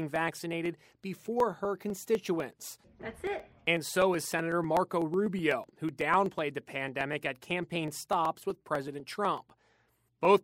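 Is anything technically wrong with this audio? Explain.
Yes. From 0.16 s to 10.37 s there are periodic USB or driver dropouts. Every 0.125 s, a stalled bus or driver skips roughly half a millisecond of audio. This produces an even ticking at eight per second, audible only while speech is present.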